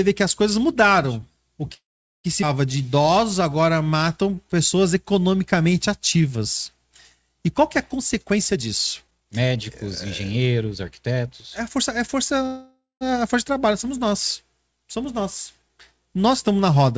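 Speech, sent over a call path with nothing above 8 kHz, which fits a G.722 codec at 64 kbps. At 1.74 to 2.26 s there is a call audio freeze. About 0.5 s is inserted, most of it silent, and nothing is lost. A second freeze runs from 12.46 to 13.03 s, just before "a força de trabalho", adding 0.55 s. A stall in packet delivery that emptied the jitter buffer is the likely cause. At 2.42 to 2.44 s the audio skips ahead. Roughly 0.3 s is dropped, and the two sides join almost directly. A jitter buffer slow-down follows from 2.77 to 6.37 s. Repeated pitch periods add 342 ms, so the sound plays at 91% speed with unchanged pitch and stretched sounds. Two jitter buffer speed-ups trim excess buffered audio. From 7.98 to 9.85 s, right after "qual que é a", the speech runs at 121% and sounds hurried, losing roughly 0.4 s. From 10.25 to 12.15 s, ending at "a força de trabalho", it runs at 106%, losing about a tenth of a second.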